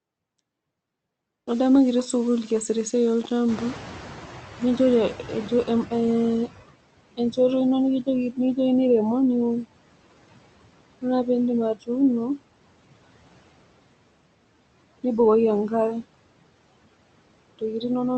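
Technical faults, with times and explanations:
Throughout: low bit depth without dither. Grainy distortion tracks the speech and quiet parts sound gritty, likely from rounding to about 6 bits, leaving error near 25 dB below the signal.
Throughout: noise suppressor artifacts. Background noise sinks between words and swells under them, as the suppressor cuts bands judged to be noise by about 21 dB.
3.48–6.57 s: noise suppressor catching up. Right after "kitii sukul kiasita esiai" the room noise jumps by about 23 dB and comes through with only about 13 dB of reduction, then sinks as the estimate adapts over about 3.1 s.
11.75–11.89 s and 17.59–17.84 s: speech cut by the noise suppressor. Brief stretches of speech sound swallowed, dipping by up to about 18 dB and about 17 dB, because the suppressor mistook them for noise.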